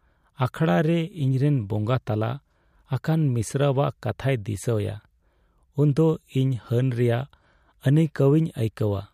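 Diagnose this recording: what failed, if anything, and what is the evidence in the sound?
Nothing in the recording points to a failure at any stage of the chain. The speech holds no audible event that would mark a problem in wiring, conversion, processing, transmission or playback.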